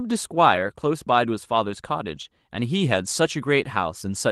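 At 0.55 to 0.57 s and again at 2.15 to 2.17 s, a lost packet was rebuilt from error correction: a single packet went missing, and the decoder filled each 20 ms slot with the low-bitrate copy carried in the next packet, so the speech never drops out. Each patch sounds briefly rougher and grainier. On a spectrogram it appears as a narrow 20 ms strip of smeared, noisier harmonics. The waveform has no gap there.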